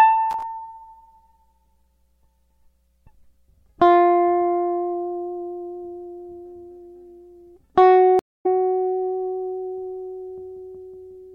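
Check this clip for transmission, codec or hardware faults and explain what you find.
Two faults are audible in the music, a brief hardware crackle and a network dropout.

From 0.31 to 0.43 s there is loose connector crackle. A poorly seated contact makes and breaks, chopping the signal into irregular scratchy bursts. Unlike digital clicks, these bursts have no regular spacing.

From 8.19 to 8.46 s a stream reconnect occurs. About 0.25 s of silence follows the lost connection. The fresh decoder then picks up the music somewhat later, skipping content rather than resuming where it stopped, as a buffer underrun would.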